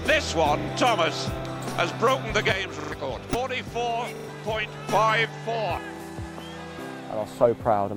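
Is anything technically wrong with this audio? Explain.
Yes, there are three kinds of fault.

Repeated buffer: at 0.60 to 0.68 s, 2.80 to 2.92 s, 4.16 to 4.28 s and 5.96 to 6.00 s the sound stutters. One short fragment plays again and again with an abrupt join each time: twice extra in the first, three times in the second and third, and once in the last. Each repeated slice fits a 40 ms playback buffer. New audio arrived late, so the device replayed the last buffer, and roughly 40 to 100 ms of fresh audio is lost at each spot.

One channel drops out: from 2.52 to 4.89 s, and again from 5.25 s to the end, the sound abruptly falls by about 6 dB, as if half of it has vanished. The likely cause is one stereo channel going missing. When the remaining signal is summed to mono, material shared by both channels drops by about 6 dB, and anything present only in the missing channel disappears entirely.

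Damaged data in a compressed stream: between 3.31 and 3.35 s there is a brief glitch. Part of the encoded stream was corrupt there, so the decoder misread or rejected those frames, lost sync and had to hunt for the next valid frame header before normal playback resumed.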